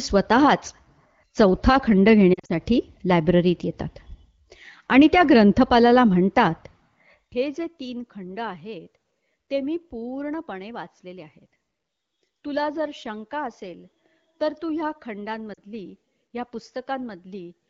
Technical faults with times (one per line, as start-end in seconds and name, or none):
2.33-2.52 lost AMR speech frames
15.53-15.60 lost AMR speech frames